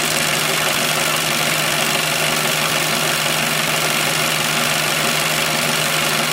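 Brief skips with abrupt joins at 0.75, 1.73, 2.70, 3.68, 4.66 and 5.63 s, each dropping a tiny sliver. This is likely audio missing between chunks of about one second.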